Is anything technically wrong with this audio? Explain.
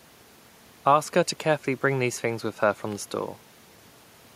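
No, the speech signal has no technical faults, and the only other sound is the room's own background noise, about 34 dB below the speech, which belongs to the recording itself.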